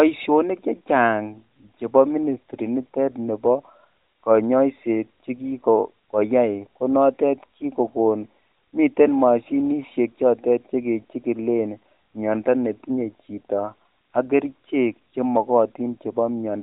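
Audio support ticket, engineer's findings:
No faults found on listening; nothing to action.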